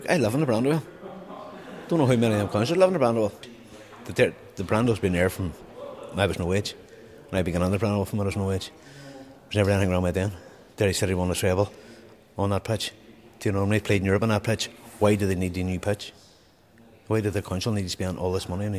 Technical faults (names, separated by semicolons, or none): none